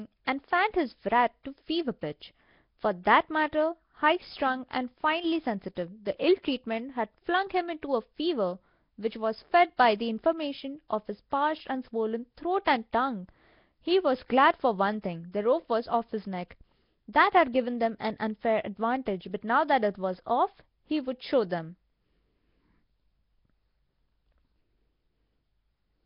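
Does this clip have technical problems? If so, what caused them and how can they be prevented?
Yes. Throughout the speech there is a rough, hissy halo and a smeared, underwater quality, with heavy codec damage. The likely cause is Nellymoser compression. The Flash-era Asao codec codes short fixed blocks at a low bit budget, and the density of the damage fits a rate around 22 kbps. Weak bands receive no bits and are filled with noise. On a spectrogram, nothing appears above about 5.3 kHz, and the upper bands show blocky, noise-filled patches instead of clean harmonics. To prevent this, record or transmit with a modern codec such as Opus at an adequate bitrate, or keep an uncompressed copy.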